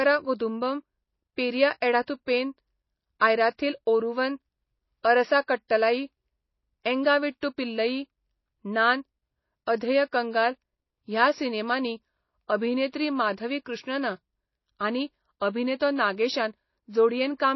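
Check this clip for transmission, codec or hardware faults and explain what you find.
Two codec faults run through this speech recording: plainly audible lossy-compression damage across the whole clip, and four short pre-echoes before sharp onsets.

MP3 compression, throughout: nothing reaches above 5.8 kHz, and the remaining band has a watery, swirling texture, with sibilants turned into metallic chirps. The likely cause is MP3 encoding at a low bitrate, consistent with roughly 24 kbps. Starved of bits, the encoder cuts the treble at a fixed frequency and drops weak frequency lines, which flicker on and off from frame to frame and smear the consonants.

Pre-echo, at 3.19 s (just before "आयराथिल ओरुवन"), 5.03 s (just before "अरसा कट्टलाई"), 7.41 s and 15.79 s: a short hiss arrives ahead of each attack, spreading 17, 14, 19 and 13 ms respectively. Each onset falls late in a transform block, and the quantisation noise sized for the loud attack is spread evenly across that block, filling the quiet moment before it. 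The attacks sound softened as a result.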